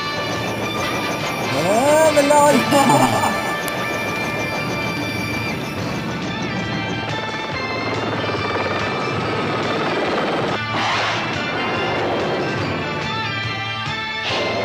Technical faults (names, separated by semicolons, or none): file header played as audio